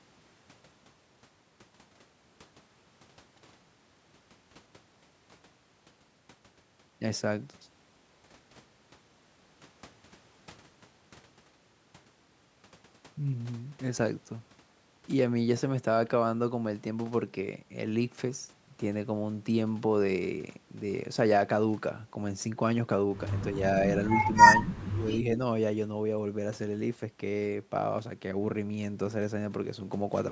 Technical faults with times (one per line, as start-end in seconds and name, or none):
24.25-24.32 speech suppressed in double talk
24.60-25.39 speech suppressed in double talk